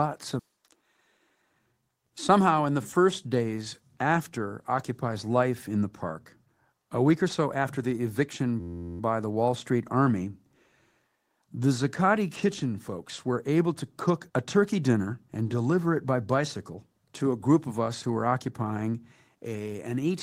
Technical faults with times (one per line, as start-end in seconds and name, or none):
0.49-2.38 jitter buffer speed-up
8.60-9.00 system hang loop